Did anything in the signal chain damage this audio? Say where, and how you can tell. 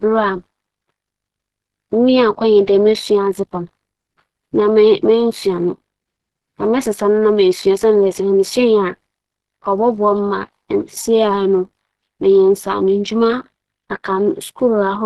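Yes, at the codec stage, throughout the speech. There is plainly audible damage that is likely Opus compression in its hybrid mode: the low band sounds hoarse and muffled, and the upper band is rough and grainy. On a spectrogram, energy stops at a hard ceiling near 12.2 kHz, and the top bands look smeared and noise-filled rather than harmonic. This fits a low rate around 16 kbps, where few bits reach the upper bands.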